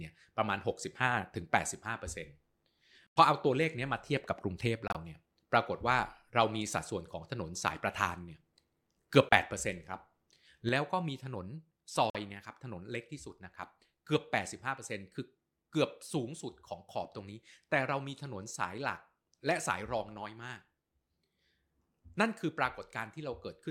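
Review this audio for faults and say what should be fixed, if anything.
Corrupt frames muted: bit errors damaged compressed frames in the speech stream, the decoder rejected them, and the player substituted silence without shifting the timing. Each hole starts abruptly: at 3.08 to 3.17 s and 4.88 to 4.97 s, both about 0.09 s long, which fits roughly four frames of about 24 ms each; then 9.29 to 9.33 s, a single-frame dropout; and 12.10 to 12.16 s, about two frames. Adding error protection or retransmission on the link, or packet loss concealment in the decoder, would prevent these gaps.

Sudden gain jump: at 10.69 s a digital gain change of about 6 dB downward was applied from one sample to the next with no ramp, likely a setting change or a one-bit shift in the level path. The speech and the background noise both drop together at that instant and stay at the lower level until the end of the clip. 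Applying gain changes with a short fade, and locking level settings during capture, would prevent this step.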